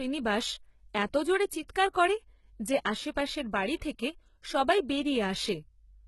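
Speech, with HE-AAC compression damage running through the whole clip: the treble reaches high but is synthetic, and s sounds come out gritty and lispy because copied harmonics fail to line up with the real ones. That sets it apart from plain band-limiting, which dulls instead. Nothing reaches above 11.9 kHz, and the heavy damage likely comes from a bitrate around 16 kbps.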